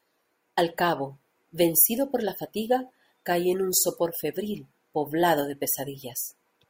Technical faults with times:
none

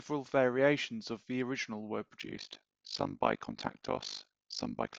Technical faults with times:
2.20-4.99 overlap-add ripple

